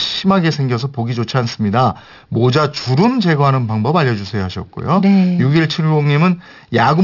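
Aliasing runs through the whole speech clip. Content above 6 kHz folds back into wrong pitches, fitting an unfiltered drop to 12 kHz. Sibilants sound gritty, with alias energy roughly 20 dB down.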